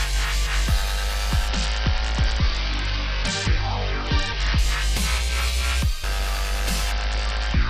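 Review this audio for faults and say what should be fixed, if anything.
From 1.48 to 4.58 s, and again from 6.91 s to the end, the treble goes dull and a gritty, grainy noise rises under the sound; the first time it then clears. This is a Bluetooth SBC bit pool drop: a congested link made the encoder spend far fewer bits, starving the top sub-bands and quantising the rest coarsely. The loss of detail points to the bit pool falling from about 31 to 8, near 66 kbps. To prevent it, reduce 2.4 GHz interference and distance between devices, or use a wired path or a more robust codec.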